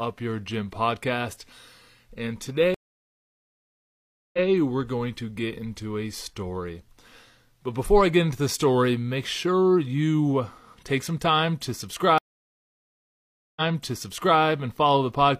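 Speech here, and it hits two stream reconnects. At 2.74 s the audio drops out for about 1.6 s, then comes back at 4.47 s roughly 0.14 s earlier than where it left off, so a sliver repeats. The second one at 12.18 s goes silent for about 1.4 s and resumes at 14.40 s a full 0.84 s back. Both times the connection broke, the player restarted its decoder mid-stream, and the server resent a burst, with the first frame fading in.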